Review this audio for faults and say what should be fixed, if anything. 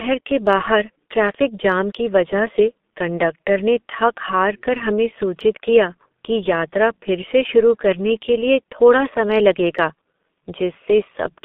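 The speech passed through a G.723.1 codec for the whole clip, a low-rate telephony coder that models the voice in 30 ms frames and throws most of the signal away. The damage is heavy: the band is limited to roughly 200 Hz to 3.6 kHz, so everything sounds muffled and thin, while the slow, coarse voice model leaves a hoarse, buzzy texture and smears consonants together, which fits a bit rate near 6 kbit/s. To prevent it, carry the call over a wideband codec at a higher bit rate, or record locally instead of capturing the telephony path.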